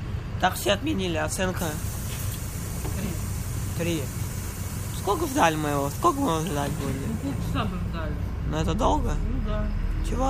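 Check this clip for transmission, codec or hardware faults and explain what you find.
One hardware fault is present. Clock slip clicks run from 0.15 to 10.25 s. Faint ticks recur about every 70 ms. Likely cause: unsynchronised clocks about 300 ppm apart, each slip one sample.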